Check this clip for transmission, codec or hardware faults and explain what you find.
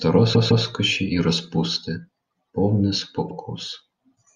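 Two stutters from repeated frames. From 0.33 to 0.64 s a 157 ms slice of the speech plays twice more, and at 3.28 to 3.33 s a 52 ms slice plays once more. A run of compressed frames, roughly six and then two, was delivered again, so the decoder replayed it, adding about 366 ms in total.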